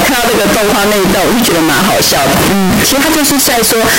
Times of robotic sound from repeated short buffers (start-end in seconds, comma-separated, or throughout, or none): none